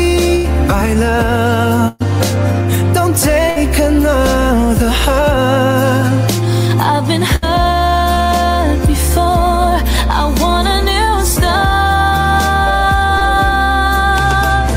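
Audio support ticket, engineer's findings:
Burst of packet loss, four events: 0.35–0.46 s, 1.88–2.02 s, 3.50–3.58 s, 7.36–7.44 s. Symptom: preceding sound held and fading, then resumes further on with material skipped. Component: network path into receiver jitter buffer. Mechanism: consecutive packets lost or late, so the decoder extends the last sound and attenuates it. Missing audio about 80 ms, 120 ms, 60 ms, 60 ms respectively. Longest at 1.88 s.

Short concealed packet loss, two events: 8.14–8.18 s and 13.18–13.22 s. Symptom: brief smear or wobble. Component: same receive path and decoder concealment. Mechanism: about 20 ms of audio never arrived in time, so the decoder synthesized a continuation from the last sound and crossfaded back into real audio. About 20 ms missing at each point.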